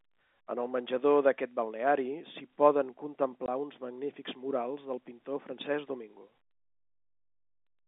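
At 3.46 s the speech drops out for a brief hole of about 20 ms, with a hard edge on each side as the sound stops and restarts. This is packet loss filled with silence. A stretch of audio never arrived, and the receiver played nothing in its place. The gap's length fits a single lost 20 ms packet. Around it, the telephone band of roughly 250 Hz to 3.6 kHz from the G.711 coding can be heard.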